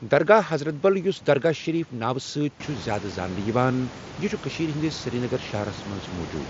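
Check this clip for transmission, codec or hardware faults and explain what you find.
Nothing to worry about here: the speech arrives over an mSBC Bluetooth headset link with that codec's usual light graininess and a top end reaching up to around 8 kHz, and the room noise that climbs by about 13 dB near 2.5 s is simply the room itself, still sitting about 16 dB below the speech.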